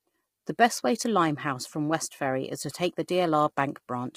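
It's a short speech clip with heavy low-delay AAC compression damage from start to finish. The voice comes across rough and grainy, with a noisy fill between the pitch harmonics and a thin, synthetic top end. That's the sound of short codec frames struggling to pin down the harmonics while running short of bits. The likely culprit is AAC-ELD, the video-call codec, and the damage fits a bitrate around 24 kbps.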